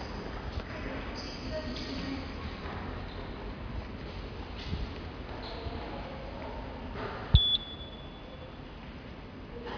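Nothing technical stands out in these everyday sounds; there's no fault here to point to.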